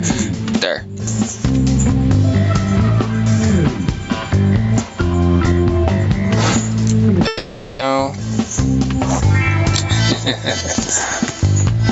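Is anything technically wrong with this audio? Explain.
Yes, there are three faults, all heard through a call path whose band stops at 8 kHz.

Gain pumping runs through the whole clip. The level swings by roughly 25 dB, so everything sounds squashed. The likely cause is input gain set far too high, with a fast limiter clamping it on each peak. A waveform shows flattened peaks and a raised noise floor between events, and a spectrogram shows background energy brightening and dimming in step with the loud parts.

A long network dropout runs from 7.27 to 7.83 s. The sound there is a smeared continuation of what came just before, a fading tail lasting about 540 ms with no fully silent gap, and when the audio resumes about 400 ms of it is missing. The likely cause is a stretch where no packets arrived and the receiver concealed the hole by extending the last sound. A spectrogram shows blurred, repeating harmonics that decay into a smear. 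The waveform shows a dying envelope before a clean restart.

A jitter buffer speed-up runs from 7.91 to 9.22 s, straight after the dropout. Once the late audio arrives together, the receiver trims short pitch-period slices to work off the extra delay, about 100 ms in all. This plays the passage about 8% fast (108% speed) at unchanged pitch, so it sounds slightly hurried. A spectrogram shows harmonics at the same height but events packed closer together. The waveform shows tiny splice points and compressed timing.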